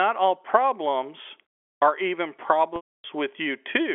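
Packet loss with pitch repetition at 2.76 to 3.04 s: about 280 ms of audio went missing, so the last pitch period repeats briefly as a buzzy hold, fades to silence, then cross-fades back into the narrowband telephone sound.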